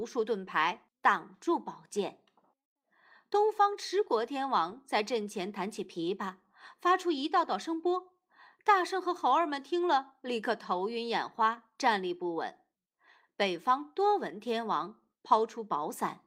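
Listening to this speech recording, nothing technically wrong stood out at any point.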